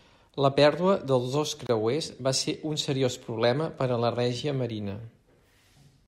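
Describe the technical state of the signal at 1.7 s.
Right around there you hit a gap at a join of encoded pieces, from 1.67 to 1.69 s, about 26 ms of silence cut into the speech. Two separately encoded chunks were butted together untrimmed, so encoder delay and end padding stayed in. The dropout has smeared edges, then the speech carries on where it left off.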